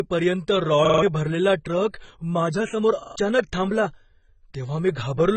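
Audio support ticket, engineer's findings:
Speech dull and smeared throughout, heavy damage, spectrogram empty above 8.6 kHz. Likely AAC compression, AAC-LC at low bitrate, consistent with about 16 kbps.

Repeated buffer stutters at 0.85–1.02 s (4 extra plays) and 3.03–3.16 s (3 extra plays). Waveform shows identical 42.67 ms blocks with hard joins, fitting a 2048-sample buffer. Around 150 ms of audio lost at each.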